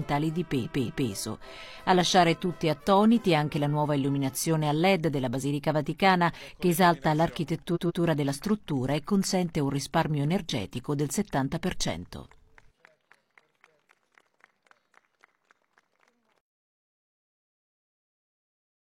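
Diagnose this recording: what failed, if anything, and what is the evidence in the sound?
Repeated frames at the codec or storage stage: a 232 ms block plays three times from 0.61 to 1.07 s, and a 139 ms block does the same from 7.71 to 7.99 s, heard as stutters. On a spectrogram, identical patches repeat side by side with vertical seams at each join.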